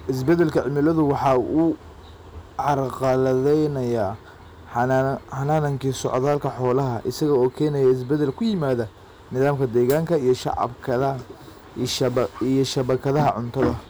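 Hard clipping runs through the whole speech clip. The level reaching some stage was about 6 dB more than it could pass, so the loudest peaks were sliced off flat, though only around one percent of samples go over. On a waveform the tallest peaks show squared-off flat tops; a spectrogram shows brief vertical smears of harmonics climbing high above the speech at those instants. It is heard as a gritty crackle on loud syllables.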